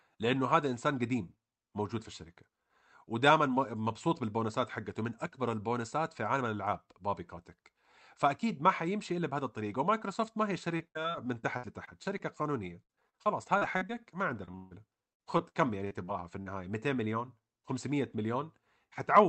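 Repeated packet loss (robotic sound) hits the speech at 10.77–12.21 s, 12.83–13.97 s and 14.45–16.48 s. Packets drop again and again, and each hole is patched by extending the last sound, roughly a fifth of each stretch, with gaps up to 156 ms. The result is choppy speech with pieces missing.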